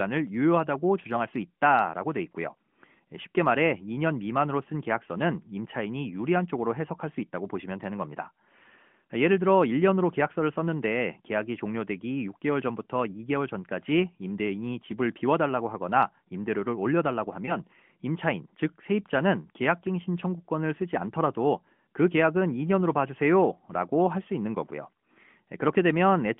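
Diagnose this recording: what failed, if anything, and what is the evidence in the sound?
Lost AMR speech frames in the network and decoder stage at 17.46 to 17.56 s: one 20 ms frame concealed by decoder extrapolation, heard as a brief dip or warble within the narrowband call audio rather than a silent dropout.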